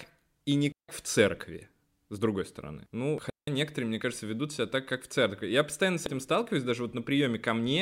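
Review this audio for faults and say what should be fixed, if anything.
Digital wireless dropouts at 0.72 to 0.89 s and 3.30 to 3.48 s cut the speech into clean holes of near silence, about 167 ms and 175 ms long. The wireless receiver lost too much data from the transmitter and muted its output with a very short fade instead of passing corrupted audio, so neither gap has a burst of noise at its edges. The result is a tidy silence where sound should continue. To prevent it, keep a clear line of sight between transmitter and receiver, shorten the distance, and move the link off crowded frequencies.

Damaged data in a compressed stream shows up as brief blips at 3.18 s and 6.06 s. At each point, some bytes of the encoded stream were wrong. The decoder could not read those frames correctly, lost synchronisation and searched for the next valid frame header, producing a short artefact lasting only a few milliseconds. 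To prevent it, transfer and store the file with checksums so corrupted copies are caught and replaced.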